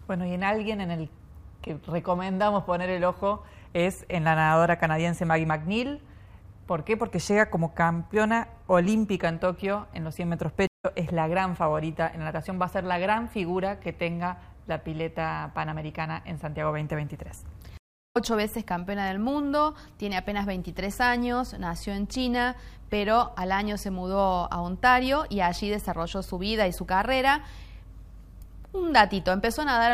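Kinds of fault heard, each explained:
stream reconnect: the link drops twice, leaving 152 ms and 364 ms silences, then a fresh decoder resumes roughly a tenth and three tenths of a second later.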